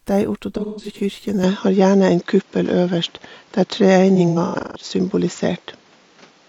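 Speech with two stretches of AAC frame loss with concealment, at 0.57 to 1.00 s and 4.15 to 4.85 s. About 256 ms and 384 ms go missing there, in scattered runs of up to roughly 150 ms, and the decoder patches them with smeared, phasey sound. Unlike plain dropouts, these gaps never fall to silence. From 1.44 s to the end, the top cuts off at 7.3 kHz, the level shifts by about 5 dB and a new noise floor appears roughly 35 dB down, with no gap at the change. That points to an input switched to a poorer device, most likely. A simple filter change would not bring new noise or a level jump with it.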